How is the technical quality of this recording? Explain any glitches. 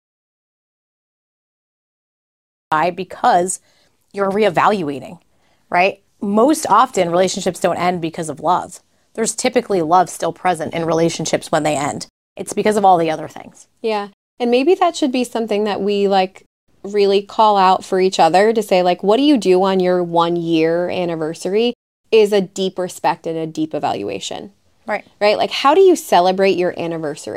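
The recording opens with a glitch: there's an audio dropout to silence right from the start, running until about 2.72 s. For those first couple of seconds you get dead digital silence, with no room tone or hiss at all, and then the speech just appears, already in mid-flow. That kind of silence usually means the input wasn't reaching the recorder, most likely a disconnected mic, a dropped link or a mute left on, while it kept writing blank samples. Whatever was said in that stretch is gone.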